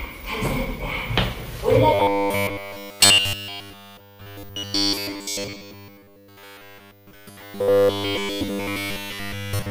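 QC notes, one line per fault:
1.94 s to 9.70 s, robotic sound from repeated short buffers: the sound turns into a rigid, metallic buzz at a fixed 100 Hz, loosely tracing the original. The likely cause is audio arriving too seldom, with each gap filled by replaying the last 10 ms while nearly all new material is skipped.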